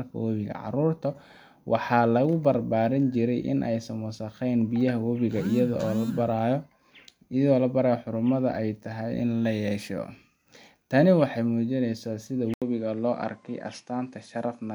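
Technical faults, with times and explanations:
12.54 to 14.75 s, input switched to a poorer device: after an 80 ms gap the speech loses everything above 10.5 kHz and turns a bit duller, with a faint new noise floor well below the speech and no real level jump. That's likely a switch to a narrower-band microphone.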